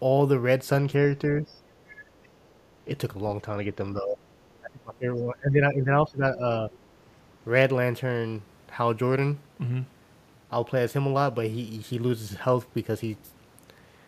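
Speech suppressed in double talk first appears from 1.29 to 1.63 s. The speech dips by about 10 dB, for roughly a third of a second. This is likely an echo canceller that heard the far side arriving at the same moment as the local talker. Unable to tell its own talker from the loudspeaker echo, it pulled the whole microphone signal down.

The other side's voice leaking through follows at 1.88 to 2.03 s. A faint second voice sits about 25 dB under the main speech, brief. It likely comes from the far-end audio playing on the loudspeaker and reaching the microphone, where the echo canceller failed to strip all of it out.

Speech suppressed in double talk returns at 3.93 to 4.18 s, with a deeper dip of about 15 dB. It comes back far more heavily from 4.61 to 6.42 s. There the speech is pushed down by as much as about 20 dB, and the ducking lasts well over a second. The same overlap-driven gain reduction clamps down repeatedly while both sides talk.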